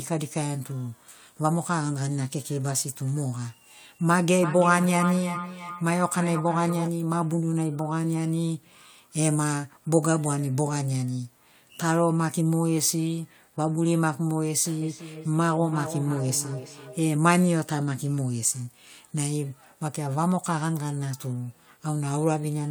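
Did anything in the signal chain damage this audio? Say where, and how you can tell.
Yes. Feedback echo between two devices, in call processing: speech recurs roughly every 300 ms from 4.42 to 6.93 s and 14.82 to 17.1 s, peaking about 8 and 11 dB below. Unlike room reverberation, the repeats are discrete and evenly spaced.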